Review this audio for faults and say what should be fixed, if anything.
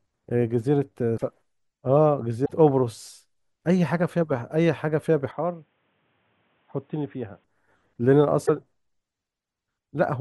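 Broken MP3 bit reservoir at 1.16–1.23 s, 2.44–2.51 s and 8.45–8.50 s: the audio skips ahead, likely from missing frames leaving the next frames to borrow reservoir bits that belong to another frame. Each fault spans under two to about three frames, which fits frames of about 26 ms. Prevent it by keeping the stream intact through transmission and only cutting at frame boundaries with reservoir data preserved.

Input switched to a poorer device, 5.31–7.44 s: with no gap at the switch, the sound abruptly turns dull, losing everything above 3.8 kHz, drops about 10 dB in level and gains a new noise floor roughly 40 dB down. This likely reflects recording moving to a narrower-band microphone or headset call profile. Prevent it by locking the recording input so the system cannot change devices mid-session.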